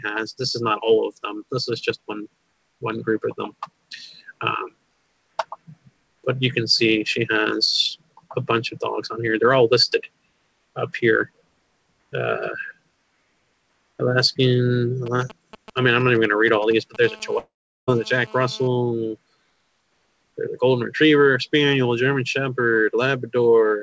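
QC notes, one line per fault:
15.06–16.96 s, GSM signalling bursts: a galloping run of short buzzes at about 217 Hz, roughly 15 dB below the sound. A nearby 2G phone is sending brief groups of radio bursts, and the audio circuit rectifies them into short buzzes.
17.03–18.68 s, GSM phone buzz: a hard, raspy 217 Hz buzz with many harmonics, about 24 dB below the sound. It holds steady because the phone is now in a call, transmitting in bursts 217 times a second, and its pulses are rectified into the audio.
17.38–17.89 s, long network dropout: about half a second of audio is lost. The last sound is stretched into a fading buzz or hiss, then roughly 0.39 s of silence before the sound resumes further on. The likely cause is audio packets that never arrived.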